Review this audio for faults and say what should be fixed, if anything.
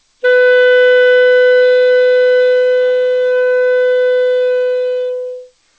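No faults; nothing to fix.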